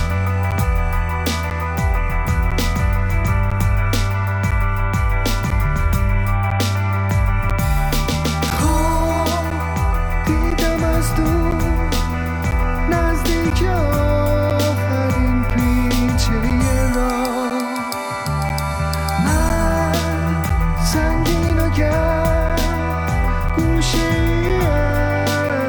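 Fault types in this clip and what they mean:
Periodic USB or driver dropouts: regular ticks once per second from 0.51 to 25.5 s, each roughly a 10 ms silent gap, as something blocks the USB bus or audio driver.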